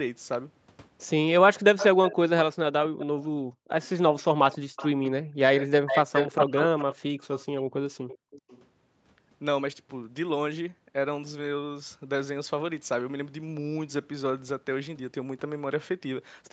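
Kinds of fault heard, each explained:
Echo leak: 1.77 to 8.61 s, a copy of the speech returns 273 ms and later 396 ms late, likely loudspeaker pickup the echo canceller missed.
Background gated by the echo canceller: 3.44 to 3.7 s and 5.26 to 5.36 s, room sound drops about 40 dB while the canceller clamps the microphone.
Speech suppressed in double talk: 6.39 to 6.77 s, speech dips about 40 dB for roughly 0.3 s, likely the canceller turning down its talker while both sides spoke.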